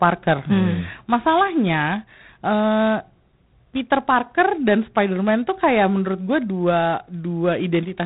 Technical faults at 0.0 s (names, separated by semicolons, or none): G.726 ADPCM